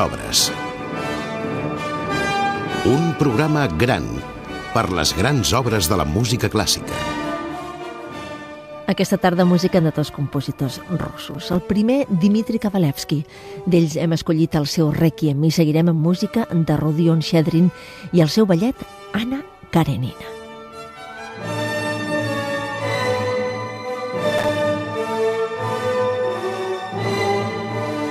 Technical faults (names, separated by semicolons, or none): processor overload crackle